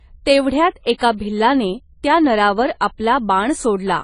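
Speech runs the full length with plainly audible AAC compression damage. Nothing remains above 10 kHz, so the sound is dull, and coarse quantisation of the spectrum smears its detail. This is likely AAC-LC coding at a low bitrate, consistent with about 24 kbps.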